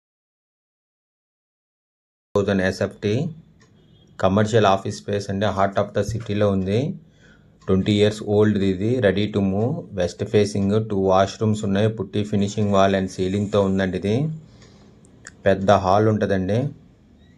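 Audio dropout to silence runs from the very beginning to 2.35 s. The opening is completely dead, with no room tone or hiss at all, and the sound then comes in abruptly mid-flow rather than with a natural onset. A silent gap like this most likely means the input was lost, through a disconnected device, a failed link or a mute, while recording carried on. Whatever was happening during that stretch is gone.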